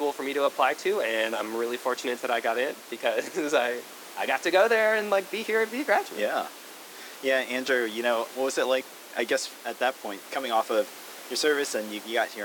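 Nothing in this speech clip points to a technical fault, and the room's own background noise stays well underneath, about 17 dB below the speech.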